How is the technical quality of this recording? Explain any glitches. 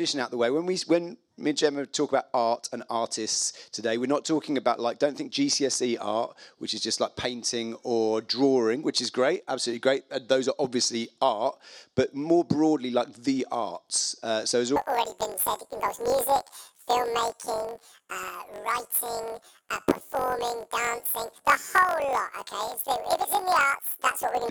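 The recording has one glitch. From 14.76 s to the end at 24.50 s, there is a planar audio read as interleaved fault. Each 21.77 ms block stores all left samples and then all right, but it is read as alternating pairs, so every block plays twice at double speed. The result is a robotic buzz at 45.9 Hz rather than a clear octave jump.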